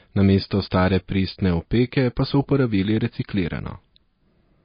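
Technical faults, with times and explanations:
Throughout, MP3 compression: the speech has nothing above 5 kHz and a watery, swirling quality, with sibilants turning into brief metallic chirps and consonant onsets smeared. The cause is likely an MP3 encoder running short of bits, consistent with a rate around 24 kbps, so it cuts the treble and lets weak frequency lines flicker between frames. A simple low-pass filter would dull the sound without that frame-to-frame warble.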